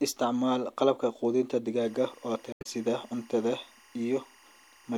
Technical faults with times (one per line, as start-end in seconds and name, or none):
1.82-4.97 timecode bleed
2.52-2.66 damaged data in a compressed stream